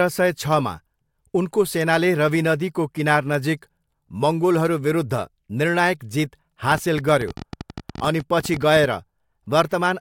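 A train of clicks runs from 6.72 to 8.85 s: about thirty sharp, similar ticks at roughly 13.7 per second, spaced unevenly rather than like a steady metronome. They stand out around 5 dB above the speech and keep going through the gaps between phrases, so they sit on top of the signal rather than belonging to it. The likely cause is interference from nearby equipment or a faulty connection or power supply injecting repeated pulses into the recording path.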